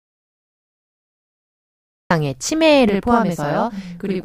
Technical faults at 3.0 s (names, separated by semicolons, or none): channel delay (doubling)